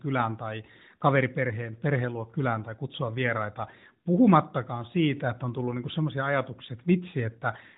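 There are no technical faults to describe at any point in this speech.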